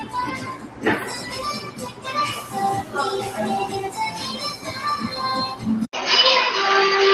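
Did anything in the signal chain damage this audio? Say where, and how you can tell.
Yes. At the call-processing stage, a speech noise suppressor runs across the whole clip of sounds, treating steady and decaying material as noise. The level swings by about 10 dB as it engages and releases. Because onsets pass while sustains sink, this is pumping rather than a level or gain fault.

The sound is cut by the noise suppressor twice: from 0.38 to 0.84 s, dropping about 9 dB at its deepest, and from 1.61 to 2.06 s, about 8 dB. Each dip lasts roughly half a second. The cuts are the suppressor's gating, not dropouts.

At 5.85 s there is an 80 ms silence. After it, the band narrows and a faint new noise floor appears, while the level stays about the same. This is likely an input switched to a poorer device at the driver stage. The sudden narrowing at a clean break separates it from codec bandwidth adaptation, which would not leave a gap.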